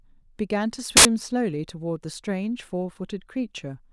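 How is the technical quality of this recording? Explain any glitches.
A single glitch mars the speech. From 0.97 to 1.05 s, file tags played as audio: embedded cover-picture data decoded as samples bursts out as very loud white noise, hard-edged, unlike a codec dropout's muffled gap.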